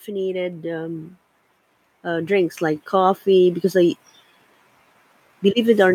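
Automatic gain rising occurs twice. The gain control judged the incoming level too low and pushed its gain upward, by about 6 dB each time: first from 0.05 to 1.11 s, then more slowly from 1.88 to 3.59 s. Because the whole signal is amplified, the speech and the background swell together, so the room noise climbs along with the voice and the loudness creeps up over each span instead of holding steady.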